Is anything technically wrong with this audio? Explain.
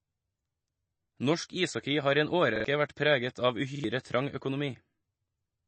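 Yes, there are two problems.

Throughout the speech, the sound is plainly watery and swirly, and there's nothing above about 8.3 kHz. That's most likely MP3 compression at a low bitrate. When bits run short, the encoder drops weaker frequency detail that flickers in and out from frame to frame, which gives that churning texture. The hard treble ceiling comes from the encoder's fixed cutoff, so the top end just stops.

There's also a repeated buffer, twice. The first runs from 2.56 to 2.65 s, right after "ishockey har i en" and just before "vært preget av". The second runs from 3.76 to 3.84 s, right after "vært preget av". Each time, new audio didn't arrive in time, so the device replayed its last chunk of about 43 ms twice more, which fits a 2048-sample buffer. You hear a quick stutter with a hard join at each repeat, and around a tenth of a second of real audio is lost each time.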